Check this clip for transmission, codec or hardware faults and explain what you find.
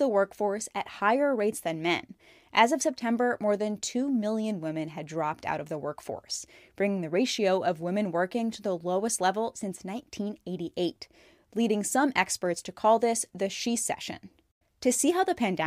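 No faults of any kind are audible here.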